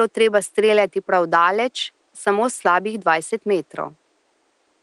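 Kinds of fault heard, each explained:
No technical faults can be heard in this recording.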